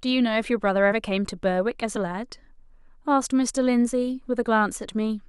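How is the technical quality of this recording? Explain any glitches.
There are two small dropouts in the speech, both compressed frames skipped. Around 0.88 to 0.93 s and again at 1.95 s, roughly 20 ms of audio is missing, so the sound jumps ahead.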